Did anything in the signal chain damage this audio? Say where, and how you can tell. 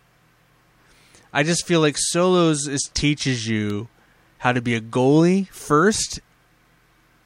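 Yes: a single sharp snap at 3.70 s, right after "like solos is teaches", peaking around -20 dBFS; likely an electrical switching spike, a nearby arc coupling into the analogue wiring.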